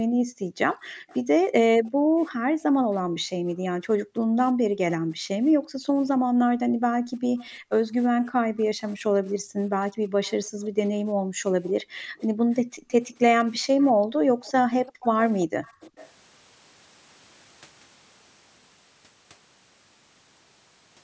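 From 0.07 to 12.89 s, background gated by the echo canceller: room sound repeatedly dips, by up to about 36 dB, for roughly seven seconds in total. Echo leak appears at 0.85–2.63, 7.38–7.5, 8.61–8.92, 10.25–10.49 and 11.66–16.11 s. A faint copy trails 343 ms behind, likely from loudspeaker sound the canceller missed. At 13.99–14.41 s the background drops again, by about 29 dB.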